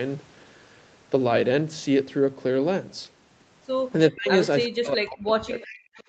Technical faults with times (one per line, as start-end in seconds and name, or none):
4.10-4.29 speech suppressed in double talk
4.65-4.69 echo leak
4.69-5.99 speech suppressed in double talk
5.55-5.74 echo leak